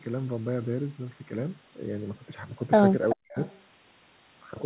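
From 3.13 to 3.38 s the speech is pushed down hard, by something like 40 dB at its deepest, and briefly nearly vanishes. This is likely speech suppressed in double talk: the echo canceller, hearing both sides at once, turned the near talker down with the echo. The level drops while the other side speaks, which sets it apart from a network dropout.

From 3.46 to 3.60 s a faint scrap of the voice returns, delayed by 382 ms and sitting roughly 30 dB under the speech. This is an echo leak, likely from a loudspeaker echo the canceller failed to remove. It is a repeated copy of earlier sound, not a gap or a level dip.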